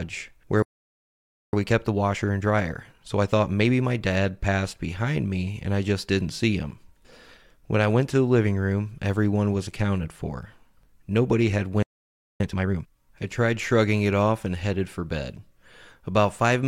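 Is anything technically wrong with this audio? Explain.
Yes, there are two playback stalls, each followed by time-compressed catch-up.

Playback stalls: the speech cuts out from 0.62 to 1.53 s (about 0.9 s) and from 11.83 to 12.40 s (about 0.57 s), likely because the player ran dry or its thread blocked.

Time-compressed catch-up: right after each stall, the player trims and cross-fades tiny pieces to clear its backlog. From 1.53 to 4.53 s it runs 1.1x fast, and from 12.40 to 12.96 s it runs 2x fast. Both stretches sound rushed at normal pitch.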